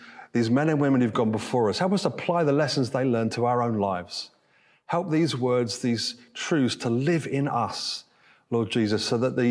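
No technical faults can be heard anywhere in this speech recording. Nothing in the sound stands out as a problem at any point.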